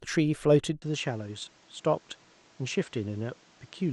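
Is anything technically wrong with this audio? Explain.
Yes. From 0.8 s, after a 20 ms gap, the sound turns dull and carries faint new background noise. Nothing remains above 8.5 kHz. This is likely an input switched to a poorer device.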